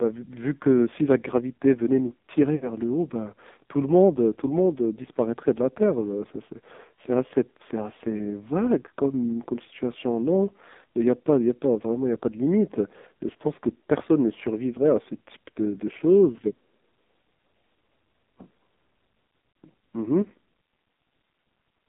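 Throughout, the speech shows heavy damage from the AMR narrowband mobile codec. The band runs only from 200 Hz to 3.7 kHz. A coarse vocal-tract model driven by sparse pulses leaves it buzzy and synthetic, which fits a low AMR-NB rate near 5.9 kbps.

From 2.56 to 2.71 s there are lost AMR speech frames. The decoder repeats its last pitch and filter settings at falling gain, so the sound smears and fades over about 60 ms, consistent with three dropped 20 ms frames. At 19.52 to 19.54 s, a single 20 ms loss gives a brief dip.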